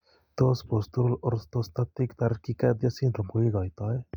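No technical faults can be heard anywhere in this recording.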